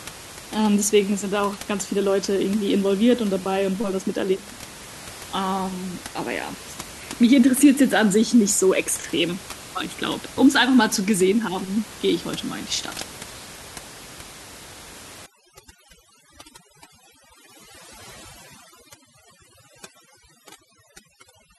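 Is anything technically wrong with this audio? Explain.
Yes. From 15.26 s to the end at 21.58 s, overdone noise removal sets in. A noise reduction stage pushed too hard is cutting whole frequency bands it mistakes for noise, taking quiet parts of the speech too. The background drops and breaks up into twinkling specks. Before that, room noise sits about 18 dB below the speech.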